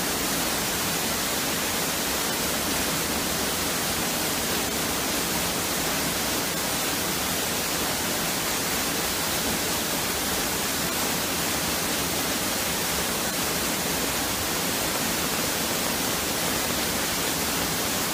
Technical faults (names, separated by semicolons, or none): train of clicks